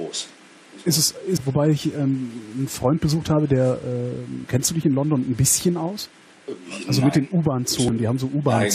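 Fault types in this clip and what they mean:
Damaged data in a compressed stream: corrupted bytes make the decoder lose sync. Brief chirps or blips sound near 1.36, 4.42 and 7.88 seconds.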